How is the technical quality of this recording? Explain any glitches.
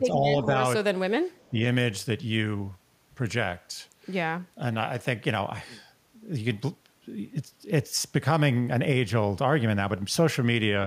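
The recording has short echo-canceller problems near the start, all within the first 1.6 seconds.

Speech suppressed in double talk at 0.0 to 0.26 s, 0.43 to 0.48 s and 1.50 to 1.56 s: the voice briefly dips, by up to roughly 15 dB, likely because the canceller muted both overlapping talkers. These dips follow overlapping talk, unlike random dropouts.

The other side's voice is leaking through from 1.37 to 1.48 s as a faint second voice, far below the speech, likely left in by incomplete echo cancellation. It is a separate voice, not a repeat of the talker.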